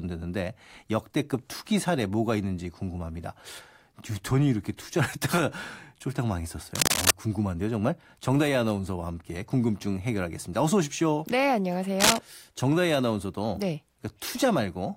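A worn cable, connector or control being disturbed is the likely cause of the cable scratch noise at 6.75 to 7.11 s and again at 12.00 to 12.18 s. As the contact resistance jumps around, dense, irregular bursts of noise ride on top of the speech, a little louder than the speech itself. Each burst sounds like a brief scratching or rustling, the first lasting about a third of a second and the second shorter.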